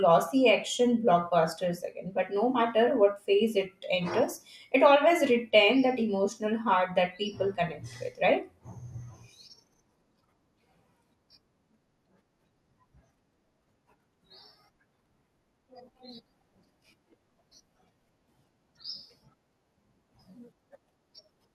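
Right after "but no", 2.88 to 3.10 s, there's DAB burbling: bit errors from weak reception scramble sub-band samples, giving short blips of noise in single sub-bands.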